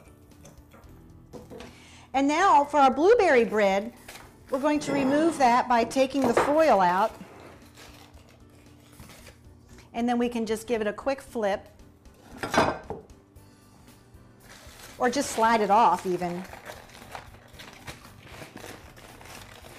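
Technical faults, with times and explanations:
No technical faults found in the audio.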